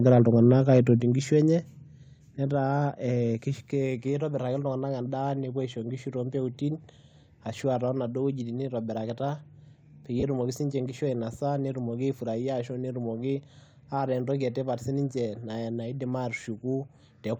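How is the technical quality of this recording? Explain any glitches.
The recording has three kinds of technical fault, all clustered at the start or in brief dropouts later.

Microphone overload, 0.06 to 0.92 s: the likely cause is input gain set too high, pushing peaks about 3 dB past the converter's ceiling. Around 2 percent of samples are flattened, giving a harsh crackle.

Microphone volume stepped down, at 1.02 s and 2.04 s: the level drops abruptly by about 5 dB and then about 4 dB, likely automatic gain reduction reacting to the clipping.

Lost LE Audio frames, 10.20 to 10.23 s, just before "etumoki siinche nkishu ainosa", and 16.39 to 16.41 s: the decoder fills 30 ms and 20 ms gaps with a noisy smear, which fits three and two 10 ms frames.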